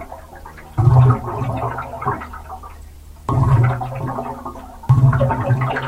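No technical faults detected anywhere in the recording of sounds.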